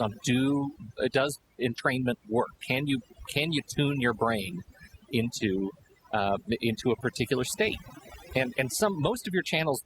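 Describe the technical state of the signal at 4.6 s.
Overdone noise removal affects 4.6 s, as it does the whole clip. An overly aggressive noise reducer is pulling individual frequency bands down or out whenever they sit near its noise estimate, taking quiet speech detail with them, so the background drops and breaks up into twinkling specks.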